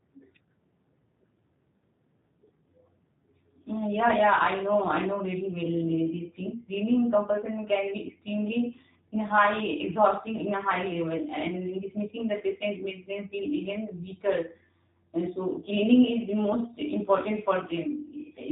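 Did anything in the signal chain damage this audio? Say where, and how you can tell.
Yes: the codec stage. G.729 coding throughout leaves speech rough and synthetic, with nothing above 3.8 kHz, consistent with a low-rate CELP codec around 8 kbit/s.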